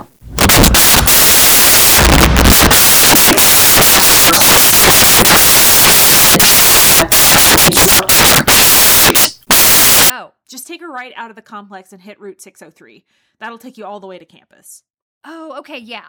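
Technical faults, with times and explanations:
0.0–10.1 s, samples built from the wrong bytes: the bytes of each speech sample are combined misaligned or swapped, so rapidly changing low bits dominate and loud, harsh broadband noise results.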